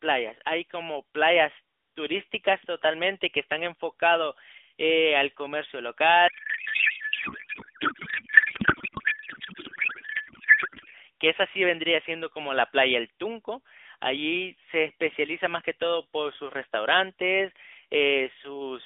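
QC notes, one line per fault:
6.28–10.95 s, codec payload misread: the narrowband line audio collapses into garbled noise and warble barely tracking the speech, consistent with octet-aligned AMR frames unpacked as bandwidth-efficient so fields land wrongly. A spectrogram shows smeared, unstructured energy below 3.5 kHz with harmonics gone; the waveform envelope loses its syllable shape.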